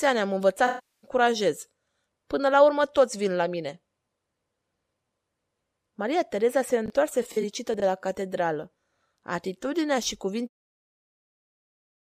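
At 0.67 s the speech dissolves into a smeared, noisy patch until 1.10 s. This is AAC frame loss with concealment. About 0.36 s of coded audio is missing, which fits roughly 17 lost frames. The decoder rebuilds the gap from the last good spectrum, so the sound smears and thins out.

From 6.86 to 6.90 s there is a brief jumbled moment. These are chunks out of order. A 20 ms chunk plays one chunk late, after the piece that should follow it. The wrong order leaves hard joins.

A second AAC frame loss with concealment runs from 7.22 to 7.44 s. About 85 ms of audio is lost in several short gaps across that span. The longest gap is around 40 ms. Each gap is filled in from the spectrum before it, so the sound turns briefly phasey and noisy.

At 7.74 to 7.82 s the chunks are out of order again. This time a 20 ms chunk lands three chunks late. The garbling is longer. The fade-out from about 10.5 s is smooth, with no edge.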